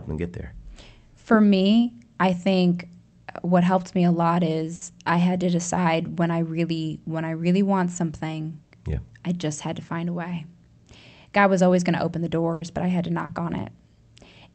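Just after "helped me a lot", from 4.75 to 4.84 s, the last sound is held and fades for about 60 ms before "I had to decide" resumes with about 40 ms skipped. This is a burst of packet loss. The receiver stretched the final audio it had, then jumped ahead, with the timing shifted about 20 ms. The same happens from 12.53 to 12.64 s after "going to open the", with about 80 ms drawn out and 80 ms lost before "but I had to". At 13.25 to 13.32 s, right after "but I had to", there is a brief smear. This is short concealed packet loss: about 40 ms arrived too late and was patched by continuing the preceding sound.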